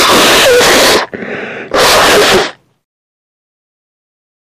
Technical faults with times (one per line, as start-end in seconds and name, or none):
0.00-1.03 hard clipping
1.74-2.45 hard clipping